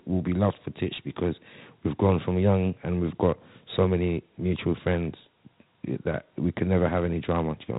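Speech clip with Dialogic VOX ADPCM throughout. Nothing is heard above 3.8 kHz. Plainly audible gritty hiss follows the speech, fitting 4-bit ADPCM at about 32 kbps.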